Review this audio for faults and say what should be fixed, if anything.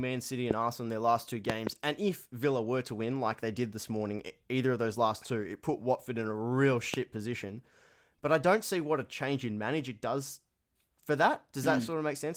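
Loud pops cut through the speech at 0.51–0.53 s, 1.50–1.69 s (two pops, between "in their last two" and "and if") and 6.94–6.96 s (after "in a real"). They peak about 15 to 20 dB above the speech. The speech continues underneath. Each is likely a voltage pulse from a plug, switch, static or driver glitch. Secure connections and ground the equipment to prevent them.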